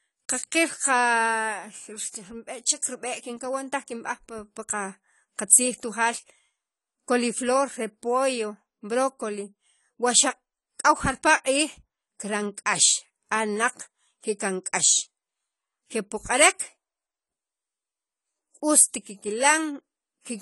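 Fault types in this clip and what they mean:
AAC compression: The speech was likely passed through a low-bitrate AAC-LC encoder. It spends too few bits on each frame's frequency lines, discarding or roughly approximating what its hearing model ranks least important. Throughout the clip nothing survives above 11.5 kHz, so the speech sounds dull and smeared. Sibilants and held vowels carry a plainly audible warbling, fizzy texture, which fits a bitrate of around 32 kbps.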